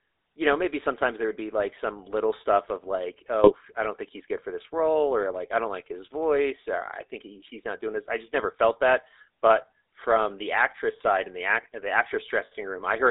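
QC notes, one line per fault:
Throughout: GSM full-rate codec. The speech passes through a vocal-tract model excited by evenly spaced pulses, with two of every three excitation samples discarded. This gives the voice a buzzy, gravelly roughness, and the codec damage is plainly audible. The line band of roughly 300 Hz to 3.7 kHz thins the low end and removes the sibilant sparkle. A spectrogram shows a hard ceiling at 3.7 kHz and a smeared, grainy harmonic structure. The bitrate fits the 13 kbps full-rate codec.
3.44 to 3.53 s: GSM bit errors. Between "little stuff of like" and "i don't think he's", flipped bits corrupt the filter, pitch and gain parameters for a few frames, and the voice breaks into a brief squawk and gargle. The error rate points to roughly 2 percent. On the waveform it appears as an abrupt disruption lasting under a tenth of a second. The spectrogram shows a sudden warped, blotchy band of energy where the harmonic pattern collapses.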